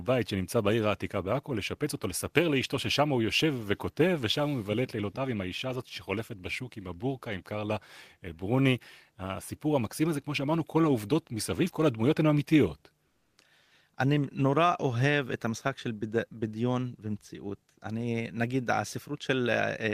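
Comfort noise in place of the background appears from 13.09 to 13.33 s, a stretch of 240 ms. Here the real room background drops out and a smooth, featureless hiss takes its place, about 4 dB quieter than what surrounds it. The likely cause is discontinuous transmission in an Opus link: the sender paused during this quiet gap, and the receiver filled it with synthetic noise roughly matched to the background until the sound resumed.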